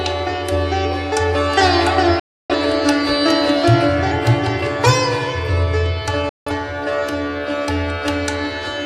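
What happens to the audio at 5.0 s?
Nothing goes wrong at 5.0 s; the audio plays through that moment intact, with no fault to be heard.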